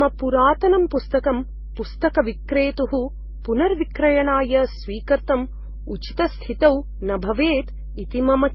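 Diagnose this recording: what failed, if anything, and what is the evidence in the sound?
A ground loop or a nearby transformer in the analogue wiring has coupled the 50 Hz power line into the signal, causing mains hum. A steady low tone at 50 Hz, with some low harmonics, sits under the speech for the whole recording. It is fairly strong, roughly 15 dB below the speech, so it stays audible in pauses and adds a constant drone beneath the talking rather than fading with level.

At the codec stage, the audio has lost everything above 5.7 kHz for its entire length, and the speech carries mixed compression artefacts: different kinds of codec damage heard together. That combination points to transcoding between lossy codecs, likely a 16 kbit/s MP3 re-encoded to AAC-LC at 32 kbit/s and then to Opus at 32 kbit/s. Each later encoder spent bits reproducing the earlier damage and added its own, while the low cut-off from the weakest link persisted.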